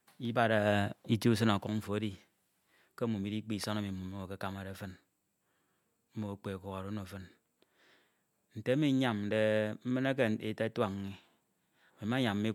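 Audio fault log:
3.64–3.66 s loud pop: one sharp pop around 10 dB above the speech, likely a stray voltage pulse; the speech continues underneath, unlike a dropout.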